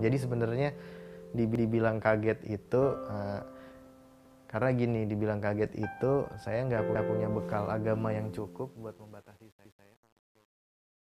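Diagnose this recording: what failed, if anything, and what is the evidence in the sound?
Overlapping chunks at 1.55, 6.95 and 9.65 s: each join replays about 200 ms of audio, heard as a stutter with a click. This is a driver or buffer fault. Each new block, consistent with 2.5 s chunks, starts before the previous one finishes, so the overlap plays twice.

Truncation distortion on a fade from 8.19 s to the end, worst from 8.52 s: the fade-out turns gritty. This is a sample-format conversion fault. The gain stage drops low bits without dither, consistent with roughly 9-bit resolution, so quiet passages collapse into coarse square steps.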